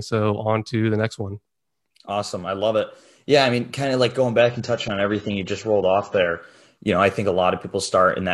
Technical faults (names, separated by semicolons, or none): adaptive stream at a lower bitrate